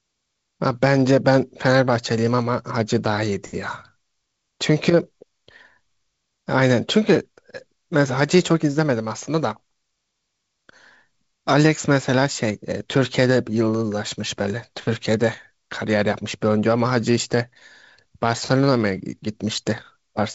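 No technical faults can be heard in this speech, which carries the band-limited character of G.722 wideband telephone coding.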